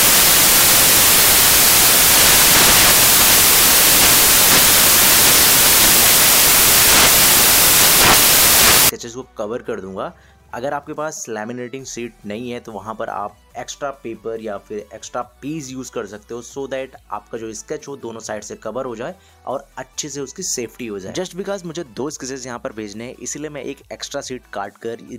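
From the start to about 8.89 s the audio is buried under loud, harsh broadband noise, the sign of samples built from the wrong bytes: the reader assembles each sample with its bytes misordered or shifted, so the rapidly changing low bits land in the high-order positions and dominate every value. Unlike added hiss or a noisy input stage, the noise comes from the sample values themselves being rebuilt wrongly.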